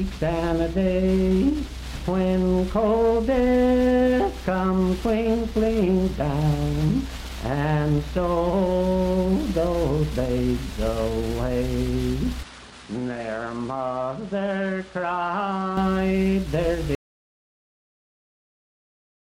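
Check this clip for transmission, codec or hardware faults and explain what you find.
Two faults turn up: a stretch where the input sounds like it came from a different, weaker device, and a dropout to silence that runs to the end of the clip.

Input switched to a poorer device, from 12.43 s to 15.77 s. The recording chain likely changed to another microphone or a headset's call profile, then switched back. With no gap at the change, the sound abruptly turns duller, with nothing above 10.5 kHz. It also drops roughly 5 dB in level, and a different background noise appears, around 40 dB under the signal. At 15.77 s the fuller, brighter sound returns just as suddenly.

Audio dropout to silence, from 16.95 s to the end. The input was likely lost, through a disconnection, a failed link or an accidental mute, while the recorder kept writing silence. The sound cuts off mid-flow and is replaced by silence, with no room tone or noise floor at all. 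It never recovers, so everything after 16.95 s is missing from the clip.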